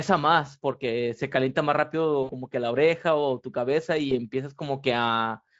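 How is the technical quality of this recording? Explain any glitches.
The recording has two short dropouts in the speech, heard through a lightly coloured Speex codec.

VoIP packet loss concealed by the speech codec occurs at 2.23–2.32 s and again at 4.09–4.16 s. When packets went missing, the decoder filled the gaps by extending its last pitch and filter settings while lowering the gain. The first gap spans about 60 ms, which fits three lost 20 ms frames, and the second fits a single lost frame. Each stretches the sound into a brief buzzy tone or coloured noise that fades, and because each frame builds on the last, the speech stays weak or distorted for a moment after normal packets resume.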